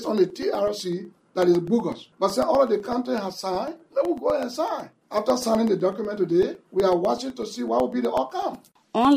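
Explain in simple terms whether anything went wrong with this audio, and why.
Something did go wrong here. From 0.05 s to 9.05 s there are periodic USB or driver dropouts. Every 0.125 s, about a millisecond of sound is lost and left silent. That happens roughly 70 times. You hear it as steady ticks, eight per second.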